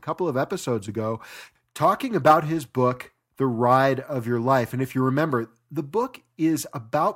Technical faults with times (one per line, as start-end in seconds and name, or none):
none